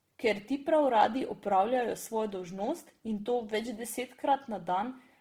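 Throughout the clip, the speech was likely squeezed through Opus compression at a very low rate, with damage that fits its music (CELT) mode running near 16 kbps. Short of bits, the encoder preserved each band's overall energy but stood in folded copies of lower bands or noise for real detail. The result is plainly audible: the speech sounds rough, grainy and noisy rather than swirly, even though the band stays full.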